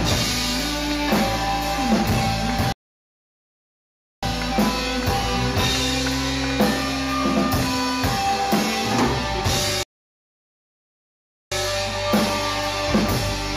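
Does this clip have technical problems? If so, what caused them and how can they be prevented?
Yes. There are two playback stalls: the sound cuts off abruptly mid-flow from 2.72 to 4.23 s, about 1.5 s of silence, and again from 9.83 to 11.52 s, about 1.7 s. The likely cause is the player running out of buffered data or its thread being blocked. Unlike a brief dropout of a few milliseconds, each gap lasts over a second, and the sound stops mid-flow rather than at a natural pause. Larger playback buffers and a high-priority audio thread would prevent it.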